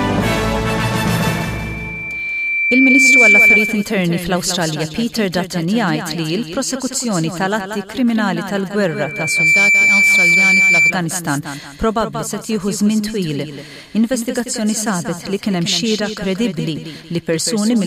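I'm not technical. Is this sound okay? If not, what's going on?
No. There's loudspeaker feedback squeal from 1.28 to 3.98 s and 8.88 to 10.93 s. A microphone hears its own speaker, so a 2.3 kHz tone swells into a piercing whistle.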